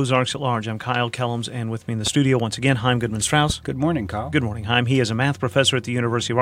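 A sharp loud pop lands at 2.07 to 2.09 s, between "with me in the" and "once again", a little above the speech. A louder one, about 10 dB over the speech, hits at 3.50 to 3.52 s. Each is likely a voltage spike added on top, with speech continuing underneath.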